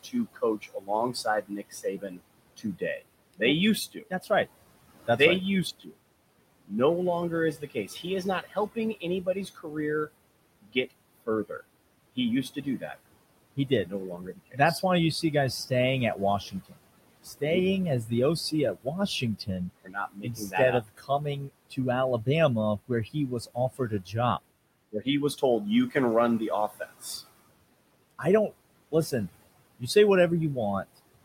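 Noise suppressor artifacts run through the whole clip: the suppressor pulls steady background down by about 21 dB frame by frame, so the room noise, sitting about 16 dB under the speech, dips between phrases and swells back underneath them. From 0.03 to 27.03 s there's speech cut by the noise suppressor, which mistakes quiet consonants and endings for noise and drops them by up to about 21 dB, around five seconds' worth of swallowed bits in total. It happens again briefly from 28.11 to 29.96 s, with dips of up to about 20 dB.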